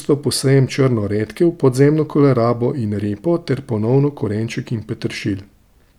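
No technical faults can be heard anywhere in the recording, and the signal stays continuous and steady throughout.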